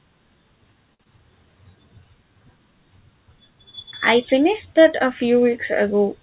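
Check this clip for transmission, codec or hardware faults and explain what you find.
Two transmission faults sit close together near the start, both at the receiver's jitter buffer. The sound is band-limited, with nothing above 4 kHz, which fits a G.711 A-law call path.

From 0.94 to 1.02 s there is a short stall from a late packet. A packet arrived late and the jitter buffer ran dry. The receiver stretched the last sound for about 55 ms, then resumed from the same point. Nothing is lost, but the call's delay grows by 55 ms. You hear one sound held slightly too long, with a faint buzz or dip.

From 1.04 to 1.07 s there is a short concealed packet loss. About 20 ms of audio never reached the decoder in time. The receiver filled the gap by extending the preceding sound, using its pitch if voiced or shaped noise if not, then blended back into real audio. Those 20 ms are genuinely gone. The result is a brief smear or wobble, and a short consonant may drop out.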